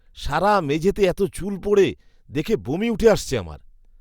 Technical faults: none

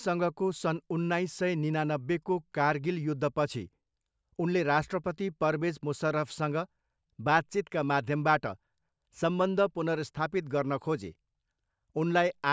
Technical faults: none

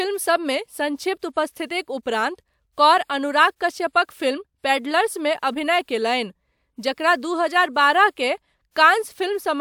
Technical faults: none

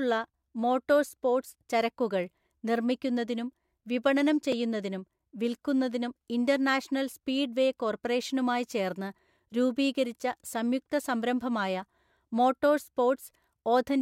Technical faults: repeated buffer

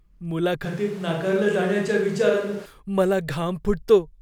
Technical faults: switch to a distant microphone

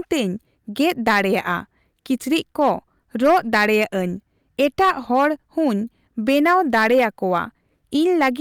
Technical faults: hard clipping

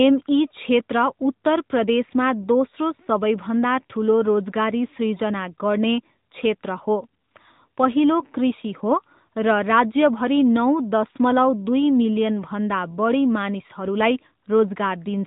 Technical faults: AMR narrowband mobile codec

